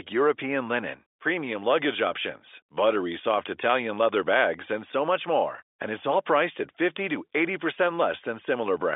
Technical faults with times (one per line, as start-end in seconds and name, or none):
none